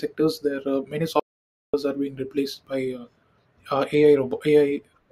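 A speech recording with one clear fault: at 1.20 s the sound stops dead and stays in silence until 1.74 s, with no room tone underneath, before the speech resumes abruptly. That is an audio dropout to silence lasting about 0.54 s, and whatever was said in that stretch is lost. The likely cause is the input signal briefly failing, through a disconnect, broken link or mute, while recording carried on writing silence.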